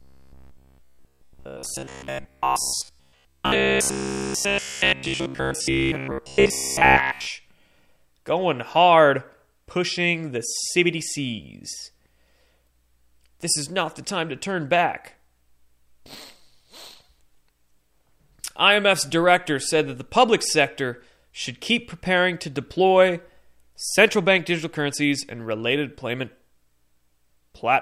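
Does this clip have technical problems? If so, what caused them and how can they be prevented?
Yes: from 0.02 to 7.27 s there's robotic sound from repeated short buffers, a metallic 66.8 Hz buzz, likely from a roughly 15 ms chunk replaying throughout. Larger buffers or steadier delivery should prevent it.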